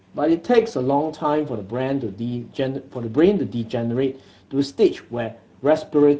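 Throughout the speech, Speex codec damage is plainly audible: sparse CELP excitation leaves a hoarse, noisy texture, which fits a mid-quality mode near 16.8 kbps.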